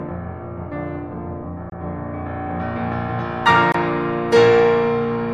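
The music was delivered in 2-second chunks with about 23 ms of silence inserted at each join, a gap between chunks at 1.70 to 1.72 s and again at 3.72 to 3.74 s. Nothing is lost, but the music is interrupted at each join, leaving short holes.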